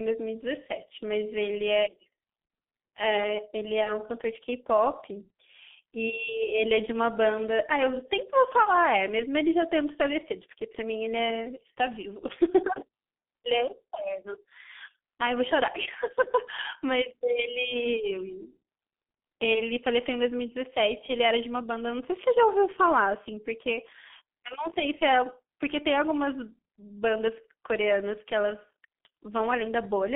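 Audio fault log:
throughout, G.723.1 codec: the speech is confined to roughly 200 Hz to 3.4 kHz and heavily coded in 30 ms frames at a rate that points to about 6.3 kbit/s, so the voice model updates slowly, leaving it muffled and hoarse with smeared consonants.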